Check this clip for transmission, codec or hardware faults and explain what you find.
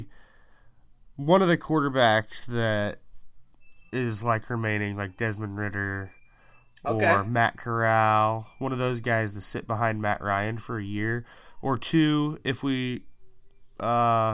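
Nothing audible in the speech points to a fault anywhere in the chain.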